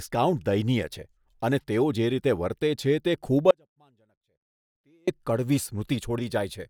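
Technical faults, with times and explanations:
3.51–5.08 s, audio dropout to a faint residue: the speech suddenly drops to a faint leak about 40 dB down for 1.57 s, likely from signal loss while the path stayed live.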